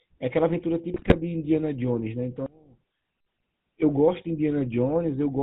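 GSM full-rate codec coding runs through the whole speech clip, and the damage is plainly audible. The speech has been squeezed through a vocal-tract model driven by a sparse, evenly spaced pulse train, with only a fraction of the excitation detail kept, and the sound fits the 13 kbps full-rate codec. Nothing survives above 4 kHz, so the speech sounds dull and boxy, with a constant buzzy, gravelly grain over every syllable.

GSM bit errors strike from 0.94 to 1.17 s. For this quarter-second, corrupted values reach the decoder and scramble the filter, pitch and gain parameters of successive frames. The spectrum lurches from frame to frame and the level jumps without warning, so the speech breaks into squawks, pops and a gargling, bubbling texture. The disturbance is dense enough to span roughly a dozen frames.

From 2.46 to 3.26 s the speech suddenly drops by about 24 dB, leaving a faint remnant. 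The likely cause is one channel inverted: with one side of the stereo pair flipped in polarity, everything common to both channels cancels when they are summed to mono, and only the small difference between them is left. Full level returns at 3.26 s.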